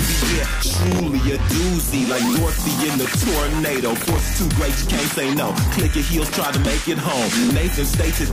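Processor overload crackle appears twice, from 0.71 to 1.00 s and from 3.96 to 4.22 s. A gritty tearing rides on the audio. The processor misses many very short buffer deadlines in a row. Each miss repeats a sliver of old audio with hard edges.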